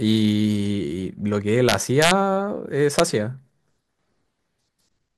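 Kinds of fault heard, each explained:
Integer overflow: at 1.69–2.11 s and 2.99 s, speech peaks up to about 2 dB over the limit wrap to the opposite sign, producing violent cracks.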